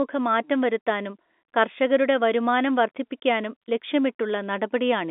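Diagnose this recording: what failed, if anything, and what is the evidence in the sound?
Nothing failed in this recording, and the sound gives no evidence of any fault.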